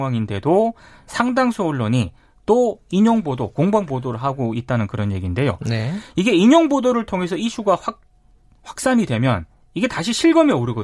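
No technical faults occur at any point in the speech, so there is nothing to place in time order.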